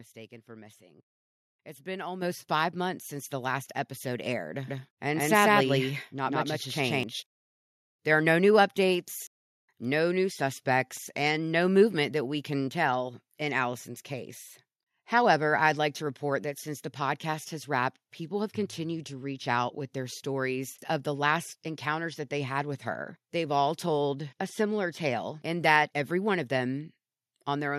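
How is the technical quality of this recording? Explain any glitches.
The recording has two level jumps from the microphone and a short stretch where the speech is doubled.

Microphone volume stepped up: at 2.22 s, just before "five months", the input gain rises by 8 dB, and at 4.26 s, after "the last episode", by 4 dB more. The call software raised the device level in single steps, so voice and background jump together. On a waveform the envelope widens abruptly; a spectrogram brightens uniformly across all frequencies.

Doubled audio track: from 4.67 s to 7.03 s, a second full-band copy of the speech runs roughly 150 ms behind, at about the same loudness. It most likely comes from a second, slower capture path being mixed in. It sounds like a flat, roomless echo that begins and ends abruptly. On a spectrogram each syllable appears twice, offset horizontally.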